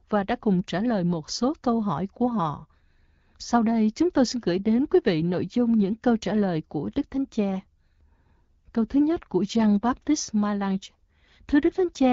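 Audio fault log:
Nothing in this speech recording stood out as a problem on listening.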